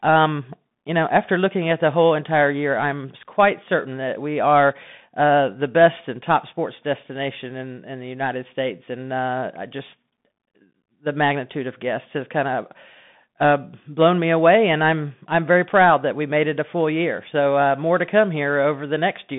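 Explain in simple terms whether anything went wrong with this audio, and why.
Yes, something went wrong: for the whole clip, the speech has passed through a Bluetooth CVSD headset codec, the basic call mode used by many wireless headsets. It only carries sound between roughly 200 Hz and 3.6 kHz, with nothing above 3.8 kHz, so the voice sounds thin and phone-like. The codec tracks the waveform in small up-or-down steps, and it can't keep up with fast, loud sounds. As a result, the damage is plainly audible: s sounds turn scratchy, and a grainy hiss sits under the speech.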